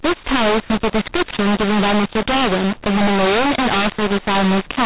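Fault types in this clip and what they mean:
mu-law and A-law mixed up: The speech was encoded with the A-law variant of G.711 but decoded as if it were mu-law, so each 8-bit code is mapped onto the wrong logarithmic curve. Throughout the clip, levels come out scrambled, some too loud and others too quiet, giving a harsh, gritty distortion. The quietest samples are lifted well above silence, so pauses fill with hiss. The band still stops near 4 kHz, which fits 8 kHz telephone coding.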